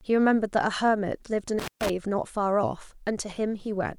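From 1.59 to 1.90 s, an intermittent contact in a loose cable or plug breaks the signal for about 133 ms, cutting the speech out with crackle at each edge and faint hiss.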